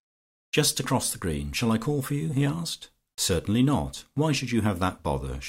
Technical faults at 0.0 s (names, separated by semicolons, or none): none